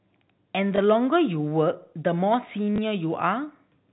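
Speech over a G.711 telephone path, band-limited below 4 kHz, with packet loss and the last packet repeated at 0.76–0.78 s and 2.76–2.78 s. Each 20 ms gap, consistent with one lost packet, is filled by replaying the previous packet, producing a small blip.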